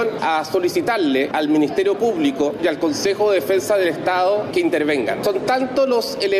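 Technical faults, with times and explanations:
Throughout, gain pumping: loud and soft parts sit closer in level and the sound is squashed, with the level swinging by about 5 dB. The likely cause is input gain set far too high, with a fast limiter or compressor clamping down on each peak and releasing in the pauses. On a waveform the loud and quiet stretches sit closer together in height.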